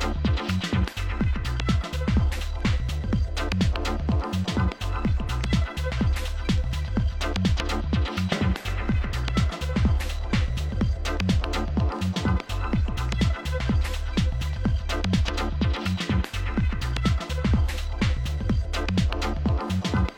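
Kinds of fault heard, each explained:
No technical fault can be heard anywhere in this audio. Nothing in the sound calls for an entry under any kind of fault.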